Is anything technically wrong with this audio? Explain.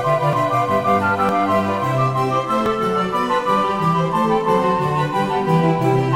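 Yes. Dropped buffers (overrun) occur at 0.33 s, 1.29 s and 2.66 s. Each is a sudden jump forward in the music. No gap of silence follows. This is likely from the recording side missing its deadline. A chunk of roughly 20 to 30 ms was overwritten before collection, and the surrounding audio spliced together.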